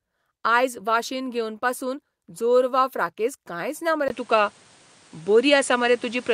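At 4.08 s, just after "फ्राकेझ कांयच ना मरे", the input likely switched to a poorer device. A 20 ms gap follows, then the speech runs to the end with nothing above 10.5 kHz, sounding duller and boxier. Its level shifts by roughly 5 dB, over new background noise about 30 dB down.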